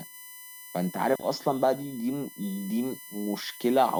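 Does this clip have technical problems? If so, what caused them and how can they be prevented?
Yes: USB whine runs throughout the speech, a fixed 1 kHz comb loudest near 13 kHz, about 20 dB down, seen as evenly spaced horizontal spectrogram lines. Prevent it with a powered isolated hub or separate, clean power and ground.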